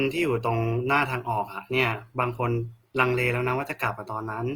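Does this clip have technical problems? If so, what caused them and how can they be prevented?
Yes. The speech sounds grainy and rough throughout, likely Opus compression at a rate that suggests about 24 kbps, noise-filling starved bands. A spectrogram shows hazy, smeared bands reaching about 20.2 kHz, without holes. Encoding at a higher bitrate would prevent it.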